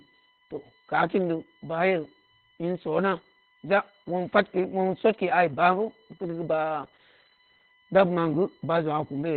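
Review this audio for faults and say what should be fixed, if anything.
USB whine, present throughout: current pulsing in 1 ms bus frames leaks through power or ground, adding a steady 1 kHz whine with harmonics peaking near 19 kHz, about 30 dB below the speech. To prevent it, power the interface separately or break the ground loop with an isolator.

Opus voice compression, present throughout: the encoder discards everything above 4.5 kHz and codes the excitation coarsely, leaving the speech muffled, hoarse and robotic. This fits narrowband SILK coding at around 8 kbps. To prevent it, raise the bitrate enough for wideband or fullband coding.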